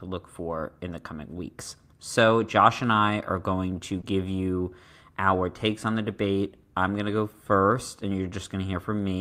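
Right after "I are going to", at about 4.01 to 4.05 s, there's short concealed packet loss: roughly 20 ms never arrived, so the receiver stretched the last sound over the gap, leaving a brief smear before "you our takes on".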